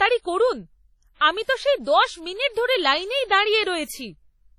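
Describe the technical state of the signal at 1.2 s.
At 1.2 s the speech carries heavy WMA compression artefacts, present across the whole clip: ringing, washy smearing and a hiss that breathes with the signal, with nothing above 16.7 kHz. This points to a transform codec likely running around 32 kbps, spreading quantisation noise over long blocks.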